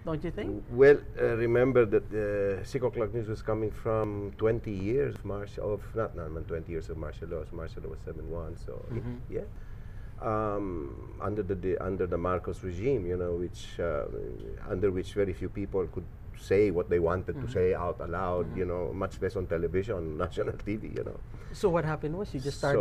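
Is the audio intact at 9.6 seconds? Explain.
No. At 9.56 s a dropped buffer (overrun) likely occurred: the program fell behind and the hardware overwrote samples before they were read, losing roughly 70 ms. The two sides are spliced directly, so the sound jumps forward without any gap.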